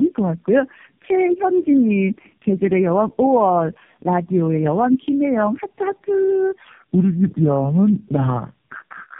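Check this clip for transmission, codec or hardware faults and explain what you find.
Two faults are audible: tandem speech coding across the whole clip, and a section at the wrong speed at the end.

Tandem speech coding runs throughout. The speech sounds as if it passed through three low-rate coders in a row, which fits a chain of G.729A and AMR-NB links. Each stage re-encodes the previous stage's damage. The result is rough, muffled and warbly, with nothing above 3.6 kHz.

The section at the wrong speed runs from 6.68 s to the end. The speech plays at 0.758 times its proper speed, so it drags and drops about five semitones. Pitch and tempo fall together. The likely cause is playback or editing against the wrong clock.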